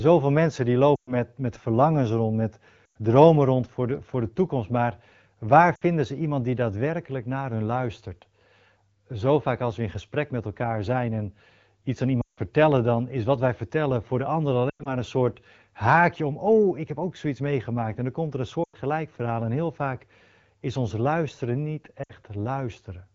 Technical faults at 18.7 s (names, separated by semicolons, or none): lost AMR speech frames